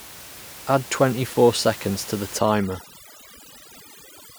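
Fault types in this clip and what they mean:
Overdone noise removal: From about 2.39 s, right after "four seconds to the", and running to the end, a noise reducer set far too aggressively cuts individual frequency bands whenever they sit near its noise estimate. The room noise, about 17 dB below the speech before this point, drops and breaks up into twinkling specks. A spectrogram shows a blotchy, holed texture with isolated dots in the gaps, and the waveform's floor drops.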